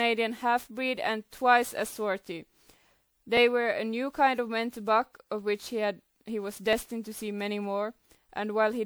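Generation loss runs through the whole speech clip: a swirly, hollow, smeared quality with blurred consonant attacks, worse than a single pass would give. It is likely the result of about ten successive MP3 encodes at around 128 kbit/s, each requantising on a shifted frame grid.

Dropped buffers (overrun) occur at 3.37 s and 6.73 s, each heard as the sound jumping ahead with no gap of silence. A few milliseconds of audio is likely lost each time because the samples were overwritten before being read, and the two sides are spliced directly together.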